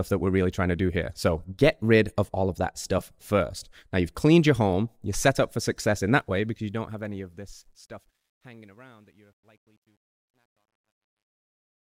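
From about 6.14 s to the end at 11.88 s, the speech fade-out picks up truncation distortion on the fade, with the level dipping gradually as the fade runs. The fade stage keeps too few bits with no dither, consistent with roughly an 11-bit path, so the tail gets gritty, worst from 8.15 s on.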